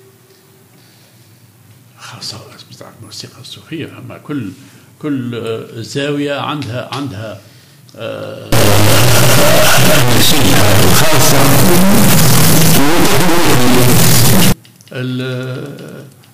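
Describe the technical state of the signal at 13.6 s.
At 13.6 s the signal sits inside a stuck bit fault running from 8.52 to 14.52 s. One high-order data bit, likely held at a fixed state by a broken line or converter, shifts about half the samples by a step near full scale, giving harsh, buzzy distortion and loud noise through quiet passages.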